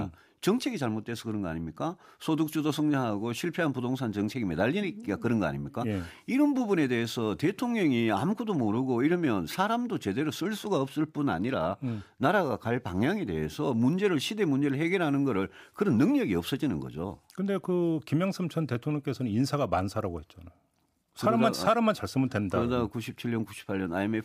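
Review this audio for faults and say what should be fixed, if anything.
Nothing to fix: no faults found in the speech recording, and no action needed.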